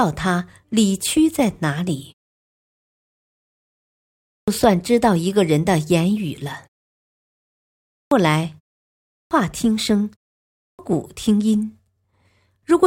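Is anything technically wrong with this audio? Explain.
Yes. Clipped start after a pause occurs at 4.19, 7.81, 9.00 and 10.47 s. The output device sleeps through each silence and takes about 0.29 to 0.32 s to wake, so speech bursts in abruptly, missing its opening sounds, even after pauses as short as 0.39 s.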